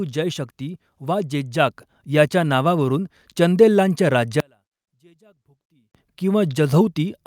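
At 1.71 s the microphone volume stepped up by about 4 dB in a single jump. The input gain was raised at the device, so voice and background noise rise together instantly. A compressor or gradual gain ride would creep rather than step like this.

From 4.40 s to 5.95 s the speech collapses by about 38 dB to a faint residue, most likely because one channel was inverted and the two cancelled when summed to mono. Unlike a dropout, the sound never goes fully silent: a trace of the channel difference stays.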